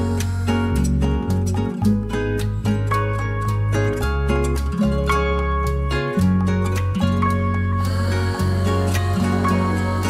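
At 6.76 s and again at 7.72 s, a corrupt frame decoded produces a brief chirp-like blip peaking around -25 dBFS. Flipped bits sent misplaced energy to the wrong frequencies. Unlike a dropout, this adds alien sound.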